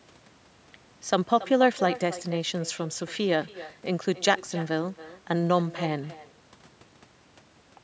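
From start to finish, every phrase is trailed by a fainter, thinner copy of itself, arriving roughly a third of a second later and sitting about 15 dB below the direct speech. This is echo with no canceller: the far end is playing the call through a loudspeaker, its microphone is catching that sound, and nothing strips it out before it travels back across the network. The audio, band-limited to 8 kHz by the call's microphone processing, carries this shadow the whole way through.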